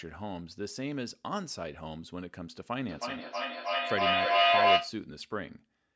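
From 2.89 to 5.03 s, a loudspeaker-to-microphone loop gaining level each pass causes feedback howl, a tone near 700 Hz with repeats about 300 ms apart that peaks about 12 dB over the speech.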